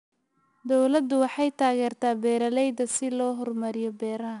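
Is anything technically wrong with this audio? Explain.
Yes. Throughout the speech, the audio has been through 4-bit ADPCM compression, which fits a stream of roughly 89 kbps. Each sample was coded as a coarse 4-bit step from a predicted value, with the step size adapting as the signal changed. The resulting error rides on the signal's level, so every louder stretch carries a plainly audible gritty hiss, and sharp onsets smear where the step lagged behind. Nothing is present above 10.6 kHz, giving a duller top end.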